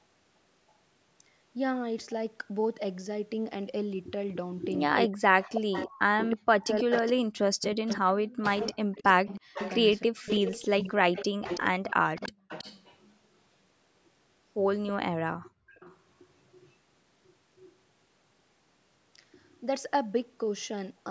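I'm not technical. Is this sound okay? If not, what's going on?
No, there are three problems.

Speech suppressed in double talk, from 5.06 to 10.28 s: the voice keeps dipping and sometimes nearly vanishes, for about three seconds in total across that stretch. This is likely because both people were talking at once. The call's echo cancelling, which stops a loudspeaker's sound from being sent back down the line, couldn't tell this voice apart from the other side's, so it turned everything down.

Echo leak, from 5.42 to 13.13 s and again from 14.87 to 17.72 s: you hear a second copy of the voice trailing about a third of a second behind. It is fairly noticeable in the first stretch and much fainter in the second. This likely comes from one side using a loudspeaker. Its microphone picked up that sound, and the echo cancelling didn't remove all of it, so some was sent back.

Background gated by the echo canceller, at 12.32 to 12.48 s and 15.32 to 15.71 s: the room's background sound suddenly drops away, briefly the first time and for nearly half a second the second time, then comes back. 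While the loudspeaker was playing, the echo cancelling turned the microphone down hard and then let go.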